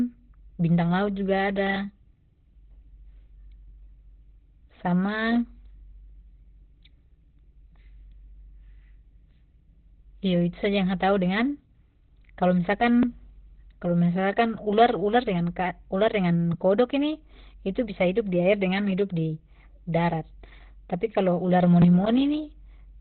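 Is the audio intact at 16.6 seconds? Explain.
No. At 16.6 seconds, as throughout the clip, the speech sounds muffled and hoarse, with nothing above 4.2 kHz. This is likely Opus compression at a very low rate, around 12 kbps, where the encoder falls back to narrowband speech coding and discards the upper spectrum.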